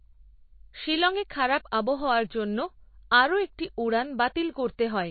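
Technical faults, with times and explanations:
Throughout, MP3 compression: the speech has nothing above about 4.6 kHz, so it sounds dull and boxed-in. Weak detail flickers in and out, giving a watery, swirly edge to s sounds. This plainly audible damage likely comes from a low bitrate, near 27 kbps.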